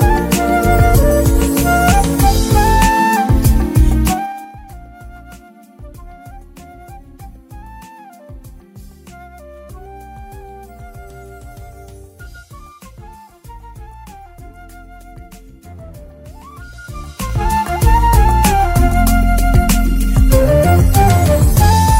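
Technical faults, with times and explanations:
4.04–4.55 s and 16.67–17.60 s, zipper noise: a drop of roughly 25 dB, then an equal rise, moves in unsmoothed steps of about 3 dB, each step clicking into an audible zipping tick.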